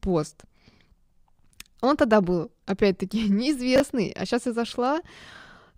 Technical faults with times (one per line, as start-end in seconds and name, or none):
3.76-3.80 chunks out of order
4.68-4.72 chunks out of order